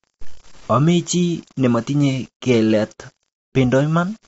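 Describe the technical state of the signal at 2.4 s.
At 2.4 s the speech is grainy, with a rough distortion that tracks the voice and turns quieter syllables gritty, sitting around 30 dB below the signal. The likely cause is low bit depth without dither: rounding to about 7 bits, with no dither to decorrelate the error from the signal.

At the same moment the voice sounds rough and grainy, with noise filling the gaps between harmonics and nothing above 7.8 kHz. This is low-delay AAC compression (AAC-ELD) at a rate that fits about 24 kbps. Its short frames resolve pitch harmonics poorly, so the codec damage is plainly audible.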